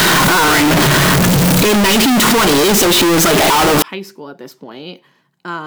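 From the start to 3.82 s, just before "high school at this", the speech sounds brutally loud and harsh. The background noise is pushed up to the same level as the talker, yet the pitch contour stays audible. This is a float read as integer fault. The likely cause is 32-bit float samples being interpreted as 32-bit integers, so each sample's sign and exponent bits dictate its value. On a waveform the trace becomes a near-square block sitting at an almost fixed, high level. A spectrogram shows dense broadband energy filling every frequency band.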